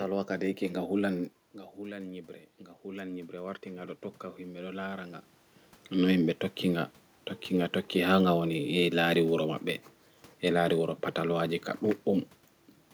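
From 1.76 s to 5.22 s the automatic gain is rising: after the speech level drops by about 13 dB, the gain control slowly adds about 10 dB. Unlike the talker moving at roughly 1.5 s, this gradual swell lifts the room noise together with the voice.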